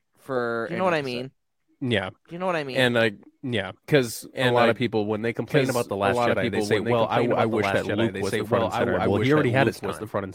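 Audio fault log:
throughout, doubled audio track: the speech runs twice, with a second full-band copy trailing about a second and a half behind and roughly 5 dB quieter. It's dry, with no decay or room sound, likely a second capture through a slower path.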